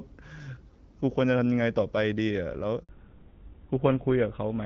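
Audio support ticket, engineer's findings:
Handover gap, 2.83 to 2.89 s (60 ms). Speech dies out fast, then dead silence. Network switch mid-call with no frames delivered in between. Waveform: flat near-silent run. Spectrogram: clean blank vertical strip across all frequencies.

Fallback to narrowband, 2.89 s to end. Audio duller and rougher after the gap. Codec renegotiated down from AMR wideband (HD Voice), which sounds like the 12.65 kbit/s mode with light coding wear. The new codec is consistent with GSM full rate. Spectrogram: energy up to about 7 kHz before, hard ceiling at 4 kHz after.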